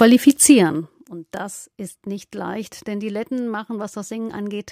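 From 0.47 to 0.93 s, a level drop of about 15 dB is applied in unsmoothed steps, roughly 200 a second, instead of as a continuous fade. Each jump leaves a small click, so zipper noise buzzes over the sound while it falls.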